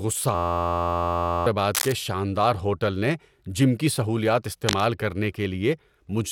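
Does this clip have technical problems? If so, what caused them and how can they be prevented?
Yes. From 0.35 to 1.46 s the speech is replaced by a system hang loop: an 11.61 ms fragment repeats exactly, which fits a 512-sample buffer. At a repeat rate of 86.1 Hz, it is heard as a steady buzz rather than a stutter, and about a second of speech is lost. The driver or host stopped supplying audio while the playback hardware kept cycling through its last buffer. Prevent it by fixing the stalling driver or process and having the output mute on underrun instead of recirculating stale data.

Cable scratch noise appears twice, at 1.75 to 1.93 s and at 4.66 to 4.86 s, the second just after "نے جم کی سہولیات". Each is a short burst of dense, uneven crackle and rustle about 5 dB below the speech. The likely cause is a worn cable, connector or control being moved, its contact resistance fluctuating rapidly as it shifts. 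Prevent it by replacing or cleaning the suspect connectors and securing cables so they cannot move during recording.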